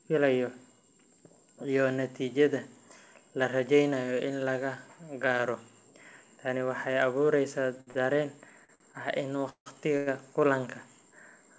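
At 7.81 s and again at 7.91 s, a late packet left the jitter buffer empty, causing a short stall from a late packet. The receiver held the last sound for 61 ms, then 40 ms, before resuming where it stopped. Nothing is lost, but the speech briefly sticks with a slight buzz or dip.

From 8.65 to 10.08 s, packets kept arriving behind schedule, producing repeated stalls (stutter). The buffer drained five times, and the receiver stretched and faded the last sound, filling 364 ms in all, with the longest gap 164 ms. About a quarter of that stretch is concealment, so the speech drags and stutters. All of this rides on the call path's band limit, with nothing above 8 kHz, which fits the G.722 codec.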